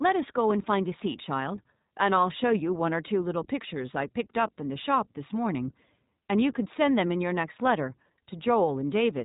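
Speech, and the whole thing has been through the iLBC codec, so it's narrowband: nothing gets through above about 3.8 kHz, and the top end sounds cut off. The coding damage is plainly audible as a rough, slightly synthetic edge on the voice. That comes from each short frame's excitation being coded on its own, which fits the 20 ms, 15.2 kbps mode. It's there from start to finish.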